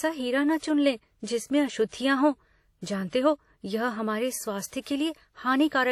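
Speech with a ringing, washy quality and a hiss that breathes with the voice throughout, which points to likely WMA compression at a bitrate around 48 kbps.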